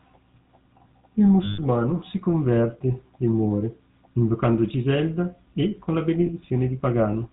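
A buzzy, gravelly roughness runs through the whole speech clip, with nothing above 4 kHz. This is the GSM full-rate codec, whose damage is plainly audible. It models the vocal tract and excites it with a coarse regular pulse train, which fits its 13 kbps rate.

From 1.44 to 1.59 s the sound freezes into a rough metallic ring. These are lost GSM frames, about seven of them: the decoder repeated the last good frame. At 6.26 to 6.29 s a briefer ring marks a single lost frame.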